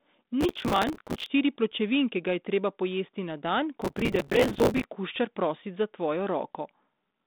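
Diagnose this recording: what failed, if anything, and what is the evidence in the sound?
The failure is processor overload crackle at the driver and buffer stage. A gritty, tearing crackle rides on the speech from 0.41 to 1.26 s, ending just before "štiri pločevinke ga je". It returns from 3.81 to 4.85 s, right after "treba pojesti na dan". The processor keeps missing deadlines on very short buffers, which fits roughly 5 ms each. Each miss repeats a scrap of old audio with hard edges. Many come in a row, so they blur into crackle. It stops when the load eases. Beneath it, the narrowband telephone sound of the G.726 ADPCM line is still there.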